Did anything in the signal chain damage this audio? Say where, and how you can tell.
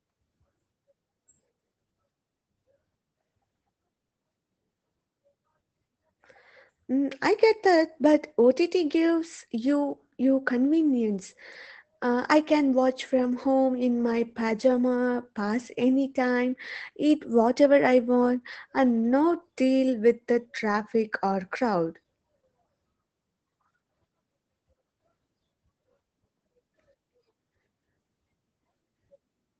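Yes, at the codec: Opus voice compression throughout. Nothing above 8.7 kHz, and hoarse, slightly robotic speech from coarse SILK coding point to a low bitrate, around 12 kbps.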